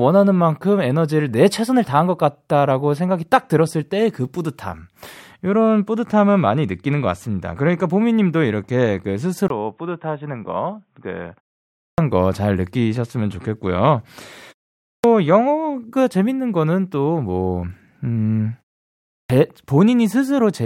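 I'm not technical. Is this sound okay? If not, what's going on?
No. Input switched to a poorer device, from 9.48 to 11.52 s: the speech suddenly turns dull and boxy, slightly quieter, with new faint background noise, after a tiny 20 ms gap. The likely cause is the recording jumping to a lesser microphone or a headset's call mode, which passes nothing above 3.8 kHz, so the crisp top of the sound disappears until it clears again.

Clipped start after a pause, at 11.69, 14.78 and 19.02 s: after each short pause of 0.33 to 0.47 s, the first 260 to 290 ms of the next phrase is missing, so the speech bursts in abruptly without its opening sounds. The playback device drops into sleep during the silence and needs that long to wake.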